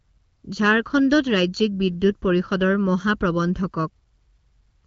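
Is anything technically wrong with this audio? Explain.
Yes. Throughout the speech, one channel lags the other by about 0.7 ms, so mono summing produces channel delay comb filtering, with notches starting around 700 Hz that make the voice hollow and phasey.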